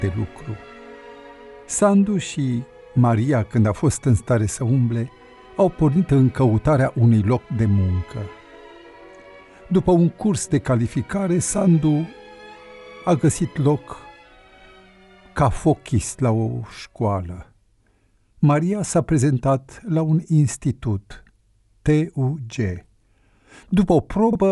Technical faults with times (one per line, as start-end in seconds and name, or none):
none